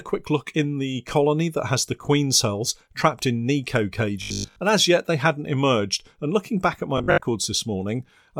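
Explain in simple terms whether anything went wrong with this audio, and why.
The audio player likely ran short of new sound and kept replaying the same 20 ms scrap. That caused robotic sound from repeated short buffers: a stiff 50 Hz buzz from 4.22 to 4.62 s, just before "and as yet they", and from 6.98 to 7.28 s, after "looking back at my".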